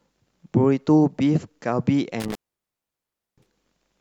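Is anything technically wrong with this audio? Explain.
Yes. There is an intermittent contact from 2.20 to 3.53 s. A loose cable or plug breaks the signal path, and the speech drops out for about 1.02 s. Crackle marks both edges of the gap. Faint hiss remains while the line is open.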